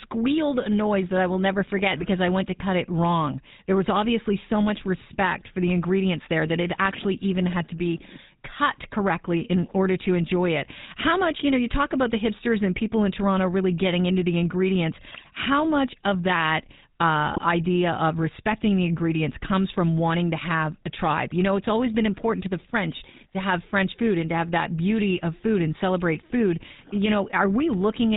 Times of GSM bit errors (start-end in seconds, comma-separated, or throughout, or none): 1.96-2.05, 15.12-15.27, 17.33-17.39